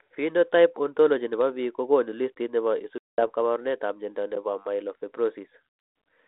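At 2.98 s, just after "ko konu listiit ne", the speech drops into a hard-edged hole of silence lasting to about 3.28 s, and when it resumes with "kaabarunetap mnyando ne po" it is slightly distorted before it settles. This is packet loss on an ADPCM call. About 200 ms of coded audio went missing, which points to a run of roughly twenty short packets. The decoder's adaptive predictor and step size drifted out of step with the sender's, so the first tens of milliseconds back are slightly distorted. The audio otherwise stays within the G.726 telephone band, about 250 Hz to 3.6 kHz at 32 kbit/s.

At 4.35 s, right after "kaabarunetap mnyando ne", the sound stops dead for about 12 ms with almost no click, then carries on with only a soft join. This is an underrun with a held sample. The output buffer ran dry and the converter held its last value, leaving a flat stretch in the waveform. The gap's length fits a 512-sample buffer. 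Playback continued where it had stopped, with no live audio skipped, so the restart is gentle.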